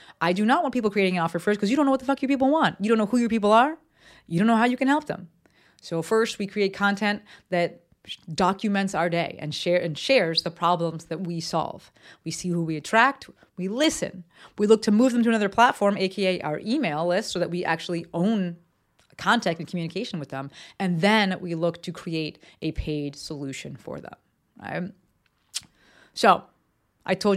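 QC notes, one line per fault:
13.84 s, dropped buffer (overrun): Just after "who we attract we", the speech skips ahead by a few milliseconds with no gap of silence. The sound on either side is joined directly, so the waveform jumps instead of flowing on. The likely cause is a dropped buffer. The program failed to read a block of samples before the hardware overwrote it. That block is simply missing, and what came before and after it now sit side by side.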